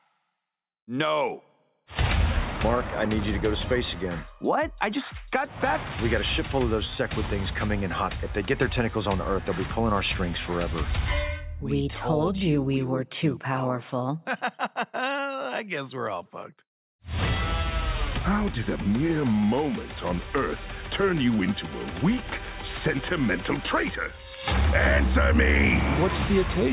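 No technical faults can be heard anywhere in this audio.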